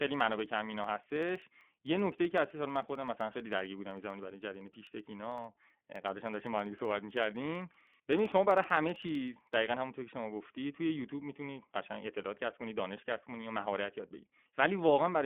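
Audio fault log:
Throughout: iLBC codec. The speech sounds boxed-in and faintly rough and synthetic, with nothing above about 3.6 kHz and little below 200 Hz. This fits a narrowband telephone codec coding each 20 ms frame on its own, at around 15 kbps, so the damage is plainly audible.
0.08 to 9.53 s: periodic USB or driver dropouts. Evenly spaced ticks recur about every 64 ms, roughly 150 of them, audible only under signal. Each time a blocked bus or driver skips a tiny sliver of audio, well under a millisecond, leaving a click at the join.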